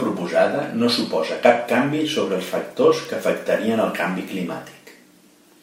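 Two sharp, isolated ticks cut through the speech, one at 3.05 s and another at 4.28 s, each a single bright click with no relation to what is being said around it. These are bit error spikes: in each case one bit of a single sample was flipped in memory or on a digital link, so that sample's value leapt by a power of two and snapped straight back, leaving a one-sample impulse whose energy spreads across the whole spectrum.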